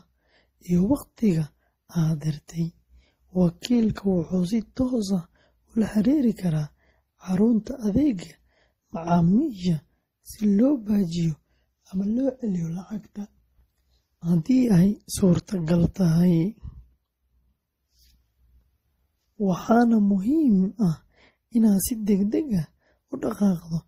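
From start to finish the speech carries the layered coloration of transcoding between lossy codecs, likely an MP3 encode at around 40 kbit/s later re-encoded as Opus at around 32 kbit/s. The second encoder spends its bits reproducing the first one's artefacts, then adds its own, so both kinds of artefact are heard together. A spectrogram shows a hard ceiling with nothing above 15.7 kHz and patchy, blotchy energy in the upper bands.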